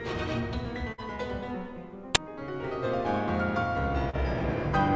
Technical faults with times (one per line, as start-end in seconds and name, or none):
0.92-1.01 burst of packet loss
2.15 uninitialised buffer
4.10-4.16 short concealed packet loss